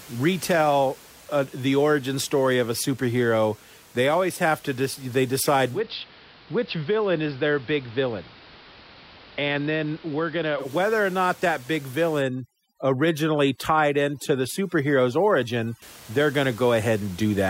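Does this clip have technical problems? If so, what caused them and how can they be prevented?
Yes, there are two. From 5.69 to 10.71 s you get digital radio blending to analogue: the receiver lost its digital stream and cross-faded over about 130 ms to the AM version of the same station. That's why the level drops by about 3 dB and hiss creeps in at roughly 30 dB under the signal, until it blends back just before "or not that big". A stronger digital signal, a better antenna, or recording from a stream instead of off-air would prevent it.

Then from 12.21 s, just after "or not that big", to 15.82 s, just before "they're going", there's overdone noise removal. The denoiser was pushed so hard that it shuts off individual frequency bands whenever they sit near its noise estimate, taking the quieter parts of the voice with them. The gaps collapse into near silence with little twinkly specks, which is odd given the room noise was already sitting about 23 dB below the speech. 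Easing off the reduction amount, or skipping it when the noise floor is that low, would prevent it.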